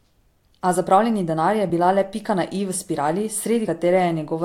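At 3.67 s the speech jumps forward abruptly. This is compressed frames skipped: a couple of frames of the encoded stream never reach the output. They were either missing or rejected by the decoder as damaged. About 50 ms of audio vanishes, so the speech lurches ahead mid-flow.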